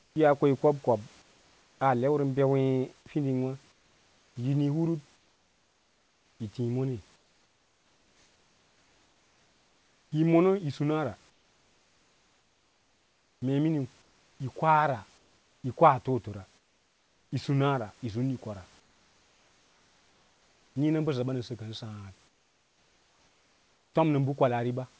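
Comfort noise in place of the background fills the pauses at 0.00–0.16, 1.22–1.80, 3.72–10.12, 11.30–15.64, 16.58–17.32, 18.80–20.76 and 22.28–23.94 s. The room noise turns flat and featureless, up to about 8 dB quieter. The sender likely stopped transmitting during silence.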